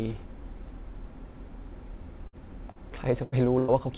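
At 2.27 s the sound breaks into a burst of packet loss lasting until 2.36 s. The receiver holds the last sound for about 56 ms and lets it fade, then jumps ahead, so about 60 ms of real audio is gone. It is heard as a held buzz or fading hiss followed by an abrupt resumption. On a spectrogram the harmonics or noise stretch into flat, dimming streaks that end in a hard vertical seam. The waveform shows a decaying envelope at the same spot.

At 2.72 to 2.78 s there is a short concealed packet loss. About 30 ms never arrived in time, and the receiver bridged it with roughly 38 ms of extrapolated sound before blending back into the real signal. It comes across as a quick smear or wobble, and a brief consonant-like sound may drop out. A spectrogram shows a small blurred patch where fine detail softens.

Two more bursts of packet loss follow. The first runs from 3.23 to 3.35 s, with about 86 ms held and 90 ms missing. 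The second runs from 3.59 to 3.71 s, with about 90 ms held and 90 ms missing. These longer gaps stretch the frozen, decaying buzz or hiss out further before the skip forward.

Across all of these, the spectrogram stays empty above 4 kHz. That band limit fits a G.711 mu-law call path at 64 kbps.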